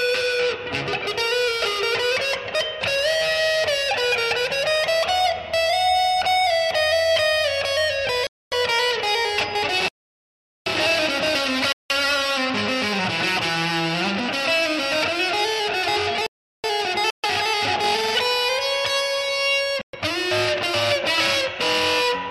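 The sound drops out six times. Four short Bluetooth stalls, at 8.27–8.54 s, 11.72–11.91 s, 17.10–17.26 s and 19.81–19.95 s, each last roughly 120–250 ms. They are likely caused by the headphone buffer running dry while interfered packets were resent. Each appears as a flat-line gap in the waveform and a blank vertical band across the spectrogram. Two longer playback stalls, at 9.88–10.66 s (about 780 ms) and 16.27–16.64 s (about 375 ms), are likely caused by the player starving of data or being blocked. They show as wider empty bands, with the sound cutting off mid-flow and then resuming.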